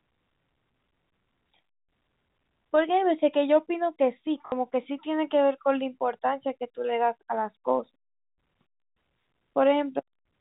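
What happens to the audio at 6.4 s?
Nothing goes wrong at 6.4 s: the speech continues intact through that moment, carried by G.711 telephone coding with its usual narrow band topping out below 4 kHz.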